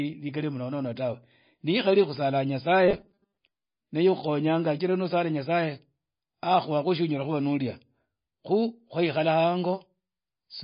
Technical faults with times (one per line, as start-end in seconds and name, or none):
0.00-10.63 MP3 compression
2.88-3.38 robotic sound from repeated short buffers